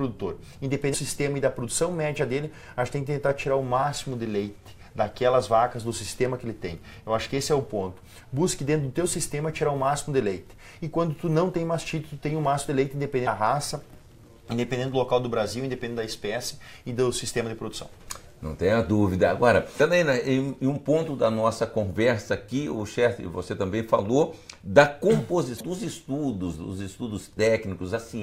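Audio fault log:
0.90–0.95 s, 19.76–19.81 s, 25.56–25.61 s: damaged data in a compressed stream. Corrupted frames briefly confuse the decoder, giving a short glitch.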